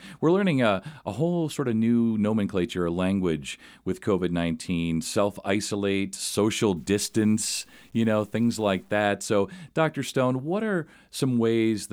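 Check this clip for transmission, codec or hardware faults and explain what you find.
One fault is audible. From 6.77 s to 9.07 s, just after "self isolate social", the speech turns grainy and gritty, with a rough distortion that rises and falls with the voice. The softest parts sputter or drop out rather than fading smoothly. The likely cause is low bit depth without dither: the signal was cut down to a few bits, which fits 8-bit truncation, leaving error roughly 40 dB below the speech. Because no dither was added, that error tracks the waveform and is heard as distortion.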